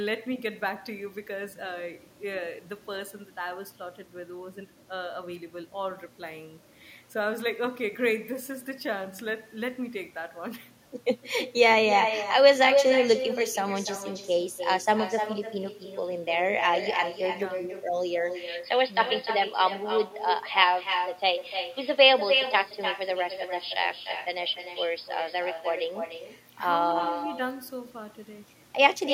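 From the start and all the way through, every phrase is followed about a third of a second later by a thinner copy only about 8 dB quieter. This is echo with no canceller: the far end's loudspeaker feeds the speech back into its microphone, and nothing removes it before it returns.

From 18.35 s to 26.06 s the speech turns duller and boxier, with faint new background noise well beneath it, while the loudness stays about the same and there is no gap at either change. The likely cause is the input switching to a poorer device, which passes a narrower band and adds its own noise floor.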